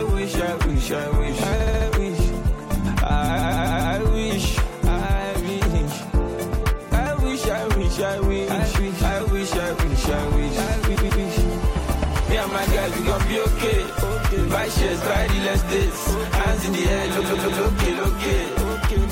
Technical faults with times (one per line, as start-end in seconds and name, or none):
1.59-1.87 repeated frames
3.38-3.94 repeated frames
10.95-11.23 repeated frames
17.19-17.61 repeated frames